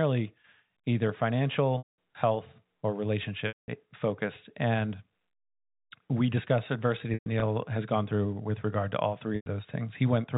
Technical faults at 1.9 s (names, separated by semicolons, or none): packet loss with pitch repetition